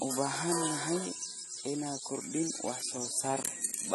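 Throughout, the speech carries AAC compression damage: nothing above 12.1 kHz, a dull, smeared top end and fizzy sibilants, likely from a low bitrate around 32 kbps.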